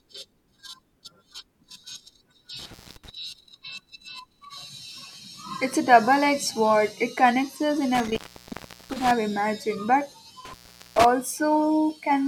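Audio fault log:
2.59–3.10 s, 7.95–9.11 s and 10.45–11.05 s, intermittent contact: a loose plug or cable connection breaks and remakes itself three times, staying open for about 0.23 s, 0.73 s and 0.42 s. Each time the link parts, the speech drops out abruptly and only a faint hiss remains across the gap. The unsteady metal-to-metal contact as it separates and reseats produces a burst of crackle at both edges of each dropout.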